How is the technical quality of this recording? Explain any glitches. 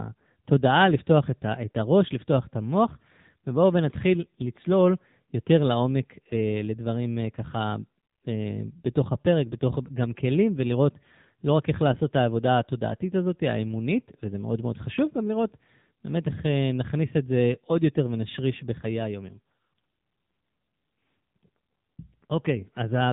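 The technical quality is limited by narrowband mobile coding across the entire recording. From start to finish the AMR narrowband mobile codec is plainly audible: nothing above 3.8 kHz survives, and the speech is rebuilt from a vocal-tract model excited by sparse pulses in each 5 ms. The resulting buzzy, synthetic edge fits a low bitrate of around 8 kbps.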